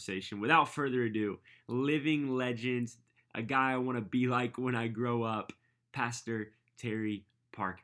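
Speech recording, and no technical faults can be heard anywhere in it.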